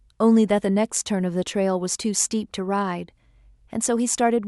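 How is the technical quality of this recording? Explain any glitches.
The technical quality of this recording holds up, with no glitches to explain.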